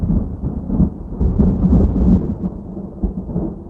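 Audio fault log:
1.2–3.35 s, call bitrate drop: the encoder was starved of bits, consistent with a fall from 32 to 16 kbps, and held at its lowest for about 1.3 s. Coarser coding sounds rough and watery. On a spectrogram the upper band below the call path's 12 kHz ceiling turns smeared and patchy.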